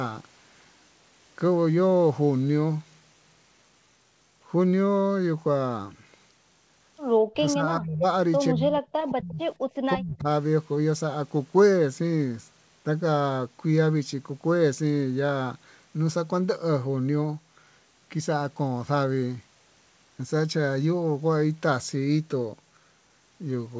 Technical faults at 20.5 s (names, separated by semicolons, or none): none